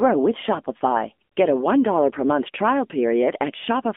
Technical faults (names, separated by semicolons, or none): AMR narrowband mobile codec